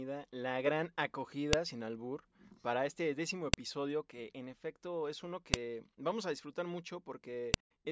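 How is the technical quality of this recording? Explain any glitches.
The recording has one recurring glitch: a file header played as audio. The speech was joined from 2-second pieces without removing each piece's header, so those few dozen bytes play as samples. Each gives a sharp, loud click, at 1.53 s (just before "sin albur para este"), 3.54 s (after "albur para este décimo"), 5.54 s (after "en efecto es uno", before "vamos a disfrutar") and 7.54 s.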